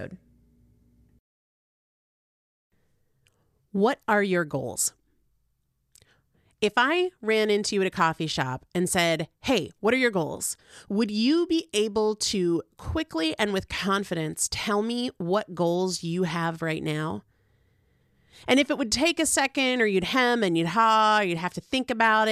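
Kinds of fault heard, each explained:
No technical fault can be heard anywhere in this speech recording. There is nothing to list here.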